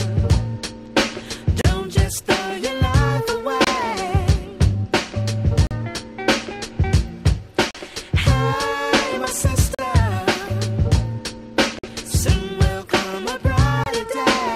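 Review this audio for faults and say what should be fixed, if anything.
Gaps between stream segments punch hard-edged silent holes into the sound at 1.61, 3.64, 5.67, 7.71, 9.75, 11.79 and 13.84 s. Each lasts 25 to 48 ms. They recur about every 2 s. Segment time stamps leave small gaps, and the player fills them with silence. No audio is lost.

To prevent this, align segment time stamps so each segment starts exactly where the previous one ends.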